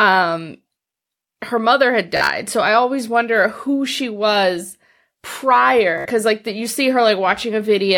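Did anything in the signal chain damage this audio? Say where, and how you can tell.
Yes. There is Bluetooth stutter on the wireless link, after "her mother had" (2.17–2.29 s) and "who she was prior" (5.98–6.05 s). Late packets made the receiver replay short slices, which you hear as a buzz.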